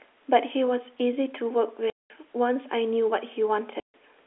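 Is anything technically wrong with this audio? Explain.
Yes. The speech drops out completely twice, from 1.9 to 2.1 s and from 3.8 to 3.94 s. This is packet loss filled with silence: the receiver got nothing for 200 ms and then 140 ms, and inserted plain silence with no concealment. Both gaps are whole multiples of 20 ms, which fits 20 ms packets. The sound is otherwise telephone-band G.711 audio, limited to roughly 300 Hz to 3.5 kHz.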